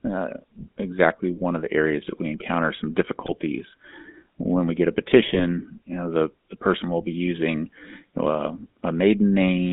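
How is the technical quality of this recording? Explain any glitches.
The quality is poor. The whole recording carries plainly audible mobile-phone coding, and it is hit twice by bursts of transmission damage.

GSM full-rate codec, throughout: the speech passes through a narrow band from about 200 Hz to 3.7 kHz, and the character of the damage fits a 13 kbit/s GSM full-rate stream. The codec rebuilds each stretch of voice from a vocal-tract filter excited by a sparse, regularly spaced pulse train. That coarse excitation gives the voice a plainly audible buzzy, gravelly roughness, and the top end is missing.

GSM bit errors, at 3.26 to 3.32 s and 5.26 to 5.40 s: the first comes right after "that we encounter some" and the second right after "when we get a". Corrupted bits reached the decoder and scrambled its filter, pitch and gain parameters for a few frames. Each spot bends the spectrum and lurches the level, so the voice breaks into a brief squawking, gargling burst. 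The second burst lasts longer.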